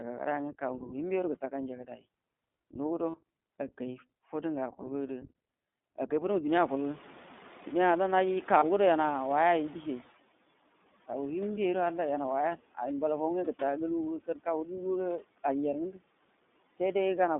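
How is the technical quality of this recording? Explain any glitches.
Technical quality is limited by a noise suppressor working hard throughout and by a plainly audible narrowband iLBC codec, with several brief glitches on top.

Noise suppressor artifacts run through the whole clip. The suppressor pulls down bands it judges to be steady noise, by about 17 dB, frame by frame. The leftover background sinks in pauses and swells under the speech.

The iLBC codec also affects the entire recording. The line passes only about 200 Hz to 3.6 kHz, so the speech is narrowband and muffled at the top. Coding each 20 ms frame on its own gives a rough, somewhat synthetic texture, consistent with iLBC's 15.2 kbps mode.

Speech cut by the noise suppressor occurs twice. Between 1.85 and 2.05 s, roughly 150 ms of speech drops by up to about 12 dB. Between 14.26 and 14.47 s, roughly 100 ms drops by up to about 17 dB. 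In both places the suppressor mistook quiet speech energy for noise, so those sounds come across swallowed and faint.

Lost iLBC frames occur at 3.10–3.16 s and 8.58–8.64 s. Each gap is 40 ms, which fits two lost 20 ms frames. The decoder fills the gap by repeating the last pitch cycle mixed with noise, so each one sounds like a short, buzzy held vowel. Because iLBC frames are independent, the voice recovers immediately afterward.

Noise suppressor catching up spans 6.47 to 10.06 s. The room noise jumps by about 20 dB near 6.5 s, and the suppressor's noise estimate lags behind it. At first the louder background comes through with less reduction, then it settles to about 9 dB of cut as the estimate adapts over roughly 3.6 s.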